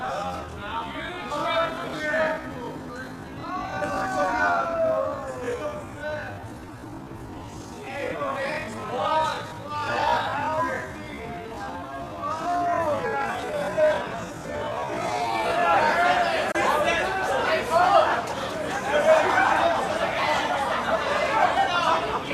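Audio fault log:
0.0–15.6 s, time-stretched section: everything crawls along at about 0.54 times normal pace while the pitch stays put, likely software repeating short slices to pad the audio out to a longer length before the pace snaps back.
16.51–16.55 s, digital broadcast dropout: a fast 8 ms fade into a tiny gap of silence, with about 24 ms of audio just gone, which fits one bad frame being muted by the receiver until clean data arrived and the sound picked up again.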